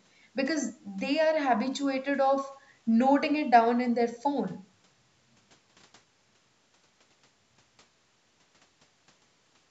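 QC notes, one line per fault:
Nothing to flag here: the speech has been through call microphone processing, so there's nothing above 8 kHz and the lowest bass is trimmed away, which is simply how that path sounds.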